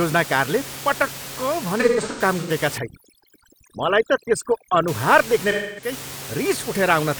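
From 1.80 to 2.50 s there's AAC frame loss with concealment. Short dropouts are scattered over about 0.7 s, adding up to roughly 340 ms of missing audio, which fits eight lost frames. The longest gap is around a tenth of a second. The decoder fills each hole from the last good spectrum, so those spots come out smeared and a bit phasey.

Then from 2.78 to 4.88 s you get overdone noise removal. The room noise, sitting about 13 dB under the speech, gets clamped down to near silence with little twinkly specks left in it. The quieter parts of the speech get eaten along with it.

From 5.51 to 5.92 s the frame loss comes back, with about 256 ms gone, which points to six lost frames. It has the same smeared, noisy patching as before.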